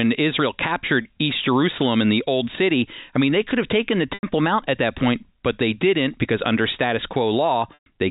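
At 1.02 s, 4.14 s after "could have taken the", and 7.74 s, packet loss with pitch repetition fills gaps of 30, 90 and 120 ms. The last pitch period repeats, which fits 30 ms packets. The first sounds briefly held and buzzy. The longer two fade to silence, then cross-fade back. The telephone-band G.711 sound passes through.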